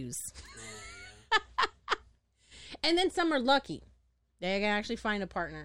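Nothing goes wrong anywhere in this bit of speech, so there's no technical fault to point to.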